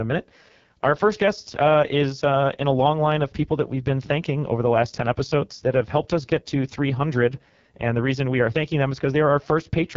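AMR wideband (HD Voice) codec throughout: heavy coding leaves the speech rough and raspy, with nothing above about 7.3 kHz, which fits the lowest 6.6 kbit/s mode.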